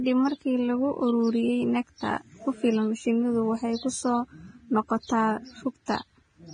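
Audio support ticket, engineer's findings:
Likely Vorbis compression at low quality, consistent with roughly 20 kbps. Treble quantised coarsely, nothing above 9.7 kHz. Result: heavy codec damage throughout the speech, with hissy, grainy texture, roughened tones and blurred consonant attacks.

Pre-echo, 5.86 to 5.88 s, just after "waxay ku soo noqotaa". Transform block spreads quantisation noise sized for the loud onset into the quiet 20 ms before it. Short hiss precedes the attack, which sounds smeared and soft.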